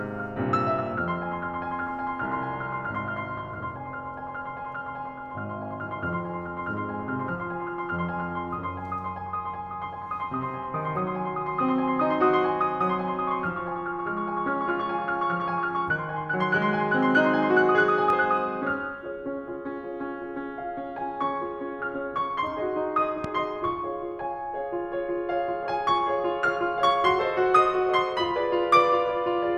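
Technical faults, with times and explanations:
18.10–18.12 s and 23.24–23.27 s, loud pop: two single sharp pops, each peaking about 10 dB above the music, which continues underneath. They were likely caused by a voltage spike from a switch, plug or static. Each shows as a narrow spike standing above the music in the waveform and a thin vertical broadband stripe on a spectrogram.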